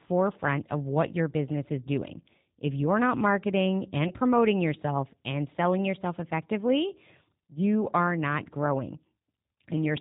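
From start to end, the speech runs through the G.729 codec at 8 kbit/s. Nothing above 4 kHz survives, so it sounds narrow. The codec rebuilds each frame from a vocal tract model and a few pulses. The result is plainly rough and synthetic.

At 4.08 s comes VoIP packet loss concealed by the speech codec. The decoder stretched its last pitch and filter to fill the gap. The sound is briefly stretched and fades. It recovers by 4.13 s, which fits one lost 20 ms packet.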